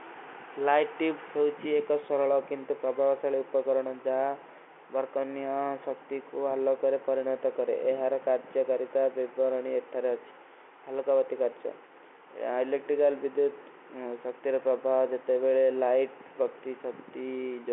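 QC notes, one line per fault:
No faults found.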